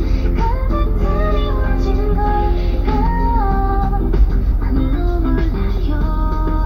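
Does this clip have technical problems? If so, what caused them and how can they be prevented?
No, this clip has no technical problems, so there is no cause to trace and nothing to prevent.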